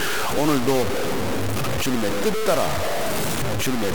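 Speech runs through the whole clip with heavy grainy distortion, most likely from low bit depth without dither: the samples were truncated to a very coarse scale, which fits about 3 bits, leaving an error nearly as loud as the voice itself. A constant dithered hiss would sit steady underneath, but here the grit rises and falls with the speech, and the quiet tails sputter or drop straight to silence.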